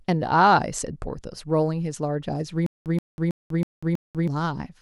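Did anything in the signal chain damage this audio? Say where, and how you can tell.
Yes. From 2.66 to 4.28 s there is a stutter with silent gaps: one 128 ms fragment returns five times, each followed by 194 ms of dead silence, every 322 ms. Likely a stalled playback or stream buffer replaying its last block at each retry, losing the audio between.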